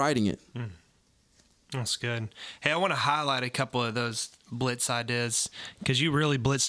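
No technical faults are audible.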